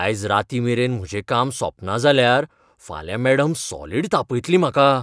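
No technical faults can be heard anywhere in the speech.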